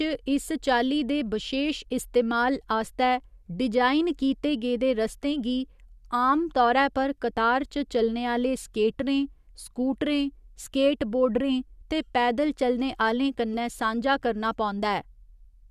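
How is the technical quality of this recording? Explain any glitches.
No technical faults can be heard anywhere in the recording, so there are no glitches to explain.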